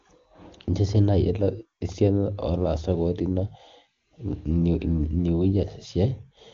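No technical faults are audible.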